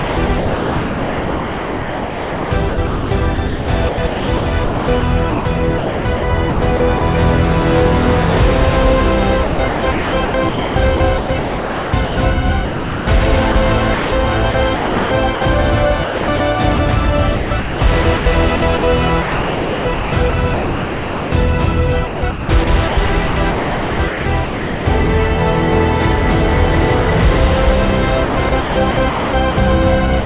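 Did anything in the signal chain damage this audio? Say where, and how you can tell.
Yes. At the call-processing stage, the sender's voice detector likely kept toggling transmission. This chopped the sound between 0.00–7.01 s, 9.44–15.41 s, 16.04–16.79 s, 17.36–21.32 s, 22.07–24.86 s and 28.25–29.57 s. Within those spans, 4.22 s, 2.76 s, 0.3 s, 2.22 s, 1.65 s and 0.66 s of sound were replaced by comfort noise, heard as holes of synthetic background.

The same detector likely also dropped the sound in the final 60 ms, from 30.20 s to the end. There the receiver substituted comfort noise, so the sound gives way to steady noise instead of ending naturally. The G.711 call path itself leaves nothing above 4 kHz.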